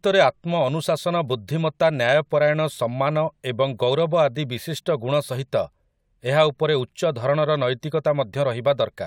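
No technical faults can be heard anywhere in the speech recording.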